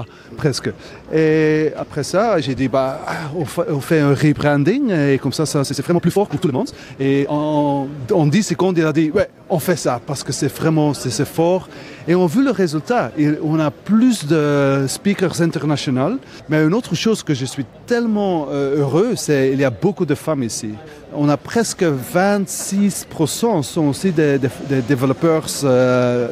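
A time-stretched section runs from 5.57 to 7.31 s, where the pace abruptly jumps to about 1.9 times normal while the pitch stays put, so the audio sounds rushed. This is likely from software squeezing that stretch to fit a shorter length, preserving pitch by dropping short pieces.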